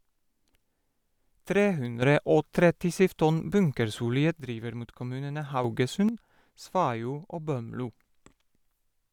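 Speech with a sudden gain jump, about 8 dB, from 2.02 to 4.4 s and again from 5.64 to 6.09 s, right after "driver mot kommunene". Voice and background leap together, likely from gain applied without any ramp.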